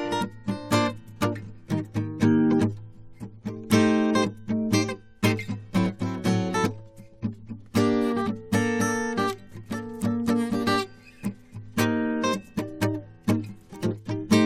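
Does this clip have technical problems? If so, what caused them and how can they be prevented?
No, no technical faults are audible.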